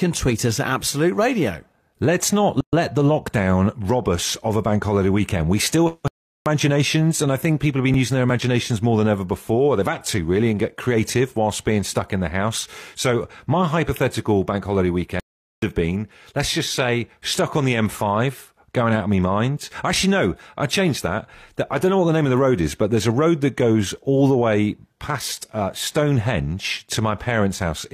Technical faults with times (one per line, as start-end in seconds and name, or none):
2.61-2.73 gap at a join of encoded pieces
6.08-6.46 playback stall
15.20-15.62 playback stall